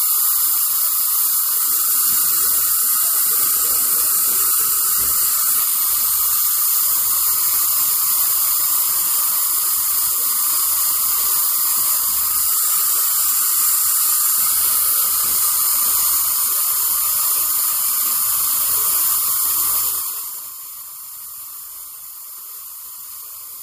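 From 19.76 to 20.54 s the level falls by roughly 15 dB in 2 dB steps with no smoothing, producing zipper noise: a ticking that rides on the sound about ten times a second. The waveform shows a staircase envelope, and the spectrogram shows a thin broadband vertical line at each step.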